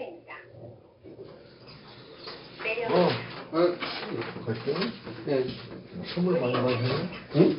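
From start to end, the audio carries 4-bit ADPCM compression. Each sample is stored as a coarse step from a prediction. The error follows the signal level, so loud moments turn gritty and sharp attacks distort. Nothing above 5.3 kHz remains, which fits about 44 kbps.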